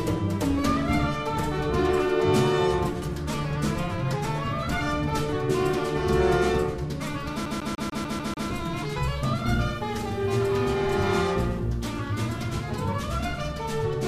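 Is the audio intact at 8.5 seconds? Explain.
No. A CD stuck on one turn runs from 7.46 to 8.49 s: the laser keeps jumping back one track, so the same 0.15 s of audio repeats seven times, each jump cut by a brief mute, giving a fast, even skipping stutter.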